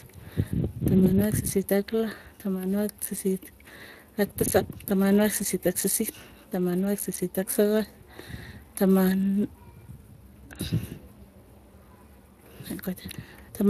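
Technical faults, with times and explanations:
throughout Speex codec: speech sounds noisy and hoarse, with nothing above 15.1 kHz, as the CELP coder's limited excitation bits, fitting roughly 22 kbps, smear detail.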